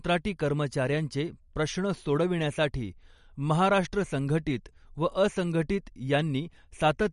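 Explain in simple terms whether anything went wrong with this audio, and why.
Something did go wrong, across the whole clip. The speech sounds watery and swirly, and s sounds lose their crispness. Nothing is heard above about 11.2 kHz. This is MP3 compression damage, likely from a low-quality encode that cut the treble and dropped quieter detail.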